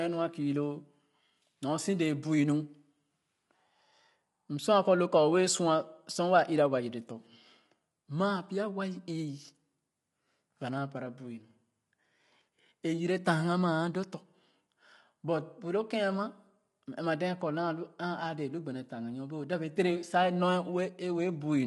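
From start to finish the speech carries plainly audible coding damage: voices sound rough and grainy, with a noisy haze filling the gaps between pitch harmonics, and the top band is cut off, with nothing above about 11.6 kHz. The likely cause is low-delay AAC compression of the AAC-ELD kind used for video calls, at a rate that fits roughly 32 kbps. Its very short frames resolve the harmonics coarsely and spend bits quickly, leaving too little for clean detail.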